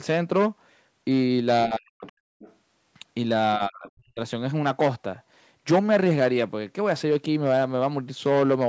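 A speech recording, band-limited to 8 kHz by call microphone processing. From 1.66 to 2.06 s and 3.57 to 4.2 s the speech drops by around 40 dB, likely speech suppressed in double talk as the echo canceller attenuates both talkers. At 2.06 to 2.12 s and 2.39 to 2.55 s, faint fragments roughly 25 dB below the speech are likely the other side's voice leaking through from residual loudspeaker echo.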